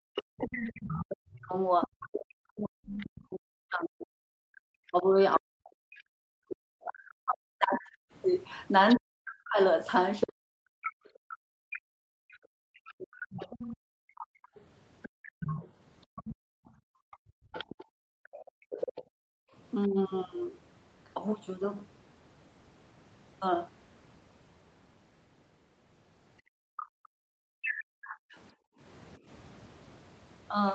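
A speech recording from a call with echo cancellation problems. Speech suppressed in double talk runs from 0.02 to 13.28 s, again at 19.86–19.98 s and at 27.01–27.41 s. The talker dips by as much as about 40 dB for around ten seconds in total, likely because the canceller could not tell the near voice from loudspeaker echo while both sides spoke. Unlike gating, the voice itself loses level. The other side's voice leaking through is heard from 0.16 to 19.03 s, roughly 15 dB below the talker, and from 26.77 to 28.36 s, nearer 10 dB below. That is likely residual echo the canceller failed to remove, and it is a distinct second voice rather than a dulled first one. The background is gated by the echo canceller from 10.97 to 19.53 s and from 26.42 to 28.8 s. The room tone falls away by up to about 40 dB while the loudspeaker plays, then returns, so it is the ambience, not the voice, that switches off. 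Nothing above about 8 kHz comes through, which fits the call's microphone processing and its Opus link rather than a fault.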